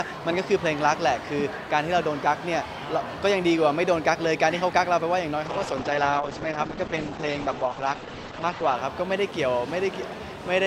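A call bitrate drop runs from 5.47 s to 8.81 s. The encoder's bit budget collapses, which fits a fall from about 128 kbps to around 9 kbps. Coarse coding turns the sound rough and watery, and the top end closes from 20 kHz to 8 kHz.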